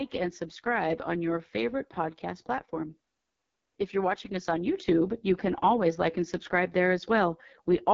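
AMR wideband (HD Voice) coding runs through the whole speech clip, and the damage is heavy. The codec rebuilds speech from a pulse-excited model of the vocal tract below 6.4 kHz and fills the band up to 7 kHz with shaped noise, so nothing is present above 7.5 kHz. The coarse, raspy texture fits the lowest 6.6 kbit/s mode, where the model gets so few bits that each syllable comes out rough and buzzy.

A sudden gain jump comes at 4.76 s, right after "you're watching us on". The speech and the background noise rise together by about 4 dB in a single step, with no fade, and stay at the higher level until the clip ends at about 8 s. The likely cause is a digital gain change or bit shift applied between one sample and the next without a ramp, which leaves an abrupt step in loudness.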